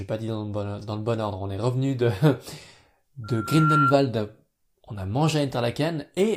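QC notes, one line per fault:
3.24–3.94 s, loudspeaker feedback squeal: a single tone at 1.4 kHz rises out of the speech, swelling over about half a second until it sits roughly 5 dB above the talker, then cuts off. A microphone was hearing its own loudspeaker, and at that one frequency the loop gain passed unity, so the tone fed on itself. Steady mains hum or an interfering whistle would hold a constant level from the start, while this one grows before it stops.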